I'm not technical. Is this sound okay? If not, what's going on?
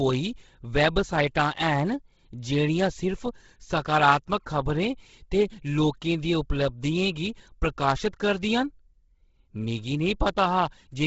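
No. From start to finish the speech has a rough, grainy, breathy edge, and it sounds muffled because nothing above about 7.7 kHz comes through. This is most likely Bluetooth LC3 compression, the audio squeezing used by newer Bluetooth earbuds and headsets. To save data, it throws away much of the high-pitched detail and fills the gap with noise, which causes the hiss-like texture. Here the squeezing is heavy, so the damage is easy to hear.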